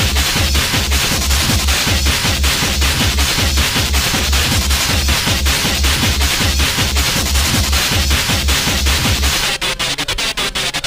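Nothing stood out as a technical fault on listening to the clip.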